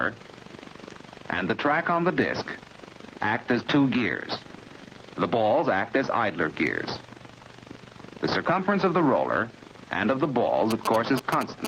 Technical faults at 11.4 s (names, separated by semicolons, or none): gain pumping; GSM signalling bursts